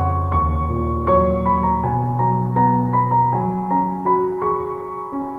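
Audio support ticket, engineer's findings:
No faults found on listening; no dropouts, clipping, level jumps or timing irregularities detected across the clip.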